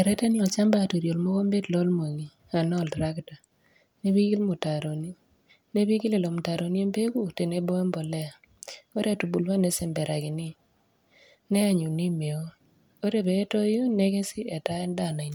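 No dropouts, distortion, timing errors or other defects register anywhere in the recording.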